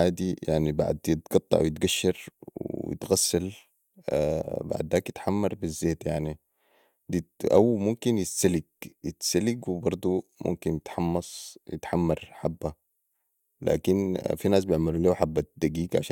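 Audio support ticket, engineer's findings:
Listened to the speech recording and found nothing to flag, so there's nothing to chase on this ticket.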